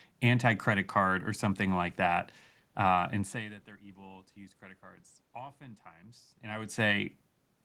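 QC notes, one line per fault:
No system faults found; the room noise and the level shifts around 3 s and again near 6.5 s, where the talker moves relative to the microphone, belong to the recording itself.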